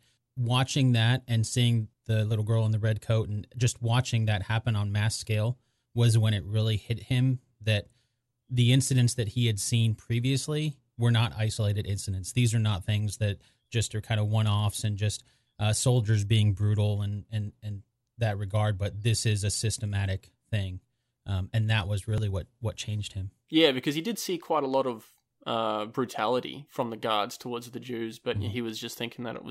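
At 22.18 s, after "and that was", a small jump marks a dropped buffer (overrun). A few milliseconds of speech were likely overwritten before capture.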